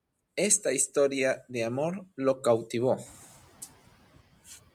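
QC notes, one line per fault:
3.05–3.71 s: noise suppressor catching up. After "de amor lo cautivó", room noise rises sharply and leaks through. The lagging estimate adapts, cutting it about 10 dB.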